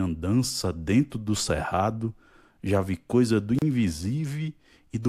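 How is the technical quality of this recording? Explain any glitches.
The recording has one audible glitch: a gap at a join of encoded pieces, from 3.59 to 3.62 s, right after "já vi coisa do". The speech drops into a silence of about 32 ms with edges smeared by the codec, then resumes exactly where it stopped. The audio was encoded as separate segments and concatenated without trimming. Each segment keeps its encoder start-up delay and its padded final frame, so a short stretch of silence sits in the middle of continuous speech.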